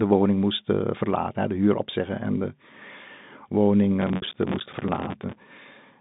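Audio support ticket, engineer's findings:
Processor overload crackle, 4.02 to 5.35 s: gritty crackle and tearing over the speech, clearing once the load drops. Audio thread repeatedly misses its deadlines. Each miss drops to a short silent gap with hard edges. Gap spacing suggests buffers of around 5 ms, with dozens missed over the burst. Probable component: host CPU or audio callback scheduling.

Packet loss with pitch repetition, 4.16 to 4.22 s, inside the crackle burst: a repeated pitch period fading out over about 50 ms into silence before speech resumes with a brief cross-fade. Receiver lost packets and bridged the hole by repeating the last pitch period. A 60 ms hole fits three lost 20 ms packets. Probable component: network path feeding the G.711 mu-law telephone link. That link's band is narrow, roughly 150 Hz to 3.7 kHz.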